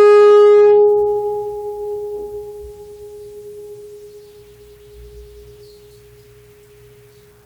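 From 0.00 to 0.84 s the music suffers hard clipping: driven about 7 dB beyond what the stage could pass, its peaks are sliced flat, giving a harsh fuzz. The waveform shows squared-off tops; a spectrogram shows harmonics smeared up high.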